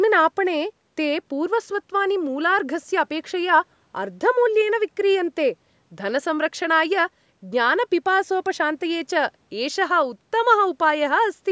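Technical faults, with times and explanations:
No technical faults detected.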